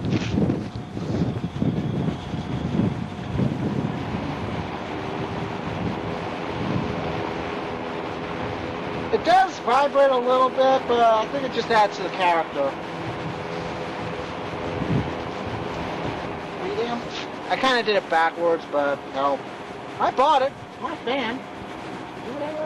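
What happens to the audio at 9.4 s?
Nothing goes wrong at 9.4 s: the audio plays through that moment intact, with no dropout, click, glitch or other fault.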